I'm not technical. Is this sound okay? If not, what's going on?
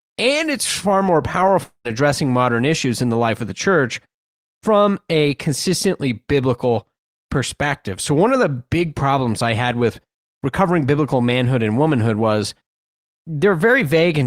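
No. At about 1.63 seconds the connection carrying this speech likely stalled, a long network dropout. For roughly a quarter of a second no audio got through. The receiving end tried to cover the gap by stretching out the last bit of sound, which you hear as a brief fading buzz, then about a tenth of a second of silence. Speech resumes at 1.87 seconds, but around 0.22 seconds of what was said is simply gone.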